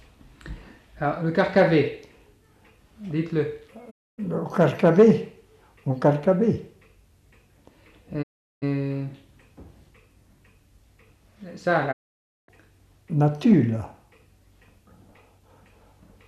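The receiver lost the digital signal and muted until good frames returned, a digital broadcast dropout, at 3.89 to 4.20 s, 8.21 to 8.64 s and 11.91 to 12.50 s. Each time the sound fades out over about 20 ms into silence and resumes further along, the material in between gone.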